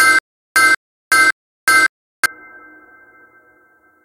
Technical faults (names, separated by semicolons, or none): stutter with silent gaps